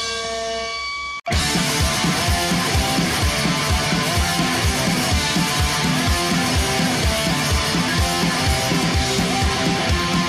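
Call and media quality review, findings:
No audible faults found; nothing to escalate.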